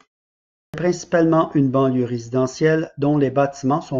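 At 0.61 s, after a 0.61 s silence, the sound re-enters abruptly, a clipped start after a pause: the output device slept through the silence and took about 127 ms to wake, swallowing the onset of "principalement une banlieue résidentielle". Unlike muted pauses, actual speech is lost here.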